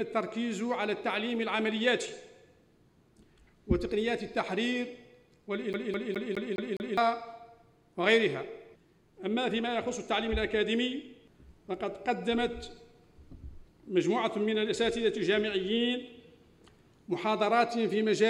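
At 5.73 to 6.97 s the laser keeps jumping back one track, so the CD is stuck on one turn: a 207 ms slice repeats six times, a fast, even stutter.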